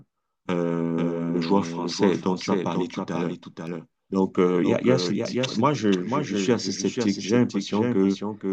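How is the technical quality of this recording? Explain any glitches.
The recording is marred by a doubled audio track running throughout. A second, full-band copy of the speech trails the original by about half a second, roughly 5 dB quieter. It is likely captured again through a slower path. Unlike a room echo, the copy has no decay or reverberant colour.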